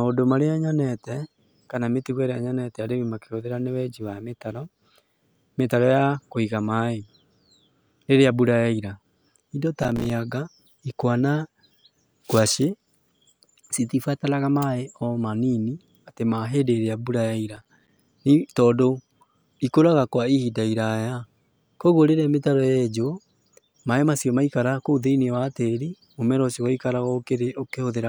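Speech with two bursts of processor overload crackle, from 9.83 to 10.10 s and from 17.54 to 17.97 s. Rapid dropouts, each a few milliseconds long, fit missed buffers of roughly 5 ms. They show as silent notches in the waveform and as vertical broadband clicks on a spectrogram.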